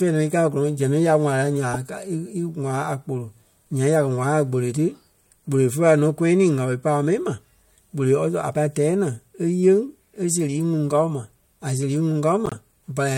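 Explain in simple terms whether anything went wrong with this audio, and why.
Corrupt frame decoded, at 1.72 to 1.76 s and again at 12.46 to 12.57 s: damaged chunks of the compressed speech were played anyway, so sound landed at wrong pitches, giving a brief squeaky burst, the later one longer, spanning several frames.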